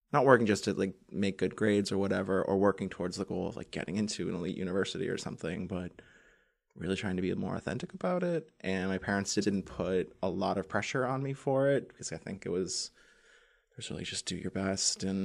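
A speech clip with repeated frames: between "my parents" and "put a lot of", at 9.41 to 9.50 s, a 92.9 ms block plays twice, which fits two compressed frames being sent again. This produces a brief stutter and lengthens the audio by 92.9 ms. On a spectrogram or waveform, two identical adjacent segments appear.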